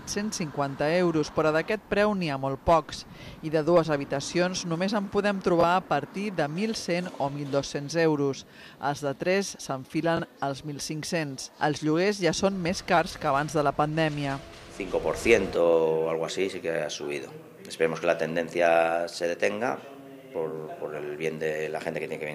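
A brief repeated slice, heard as a tiny stammer, interrupts the sound twice, from 5.61 to 5.64 s and from 10.17 to 10.19 s. Each is a Bluetooth stutter: data arrived late or went missing, so the receiver replayed its most recent buffer to fill the gap. About 21 ms goes missing each time, which fits a single lost packet, and the sound then picks up further along, as though it had kept playing through the gap.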